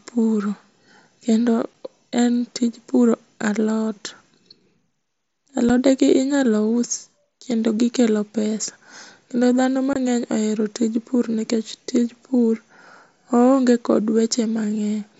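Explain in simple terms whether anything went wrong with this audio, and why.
Something did go wrong: three brief dropouts from unconcealed Bluetooth headset packet loss. The wireless link between headset and phone lost small chunks of the speech, and nothing filled the gaps. Short holes of silence result, with sharp edges that can click. The first comes at 1.74 s, just before "en tij puro alot". The second is at 5.69 s, before "inyalo us kendo gikelo". Each lasts about 7.5 milliseconds, which fits one lost packet. The longest runs from 9.93 to 9.96 s, before "ohero tij pur nikech", and sounds like three packets in a row. The mSBC headset codec carrying the speech adds only a light grain.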